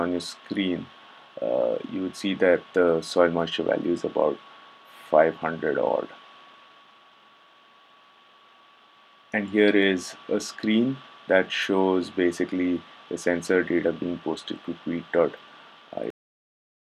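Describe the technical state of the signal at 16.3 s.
A cut-off end governs this moment: the signal stops abruptly at 16.10 s and stays in digital silence through to the end at 16.92 s, so at 16.3 s nothing is present at all. The final stretch of audio was never written out or played back, so the sound is severed mid-event rather than fading. There is no natural decay or room tail, just an instant drop from active sound to silence.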